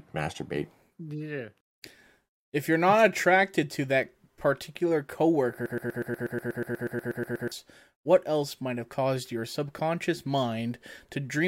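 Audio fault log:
5.66–7.52 s broken-record loop: a 121 ms fragment repeats 15 times back to back, identical each pass and never decaying as an echo would, until "what else might have". This is likely a stalled stream replaying its last buffer, so the speech meant for that span is lost.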